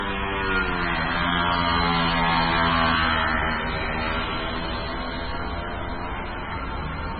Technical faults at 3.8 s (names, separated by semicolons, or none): MP3 compression